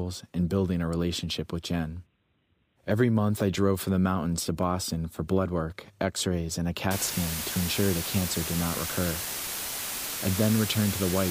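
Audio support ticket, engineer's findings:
Low bit depth with dither, 6.91 s to end of clip. Sudden constant, even hiss under the speech, nearly as loud as the voice itself, with no crunch or distortion. The sound points to requantisation to about 4 bits, with dither added before rounding so the error becomes steady white noise. Spectrogram: flat broadband noise floor filling all frequencies from 6.91 s. Waveform: thick fuzz band throughout, no gaps between words.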